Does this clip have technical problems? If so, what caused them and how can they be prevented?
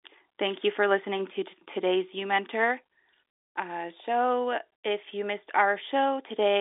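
No, nothing in this speech recording stood out as a technical problem on listening.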